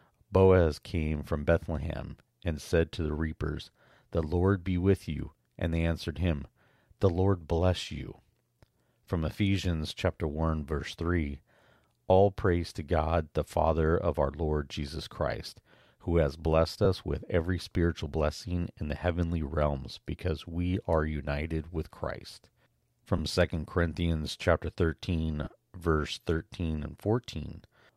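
Lost LE Audio frames at 16.85 s (between "who has blessed" and "with every spiritual blessing"), 23.18 s and 25.44–25.47 s: the decoder refills each gap with the last spectrum under random signs, so the sound blurs into a brief noisy smear, and the spectrogram shows 10–30 ms patches of blurred, flattened harmonics.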